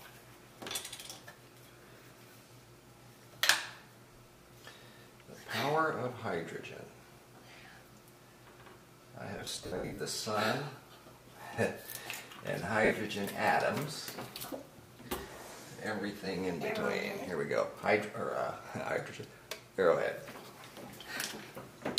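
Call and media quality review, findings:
Lost LE Audio frames at 9.38–9.98 s and 12.85 s. Gaps scattered over 600 ms, runs up to around 70 ms, then a single 60 ms gap. LC3 concealment repeats the last spectrum with random signs. Tones smear into noise.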